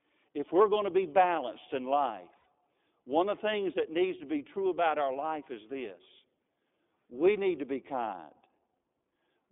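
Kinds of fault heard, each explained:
iLBC codec: The speech has passed through the narrowband iLBC VoIP codec. The audible band runs only from about 250 Hz to 3.6 kHz. Each 20 ms frame is coded on its own, which fits the 15.2 kbps mode. The coding roughness is plainly audible, giving a slightly synthetic edge.
Lost iLBC frames: From 2.38 to 2.47 s, about 80 ms of audio is missing, which fits four lost 20 ms frames. The decoder fills the gap by repeating the last pitch cycle mixed with noise. This sounds like a brief held, buzzy vowel. The speech then recovers almost at once.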